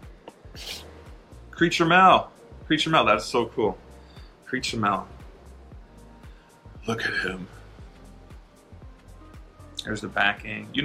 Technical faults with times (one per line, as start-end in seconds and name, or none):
none